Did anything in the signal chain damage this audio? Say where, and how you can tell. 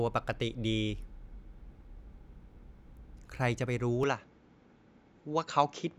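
Yes. From 4.03 s, the speech loses all content above 7.6 kHz and shifts level without a gap, likely because the input switched to a poorer device at the driver.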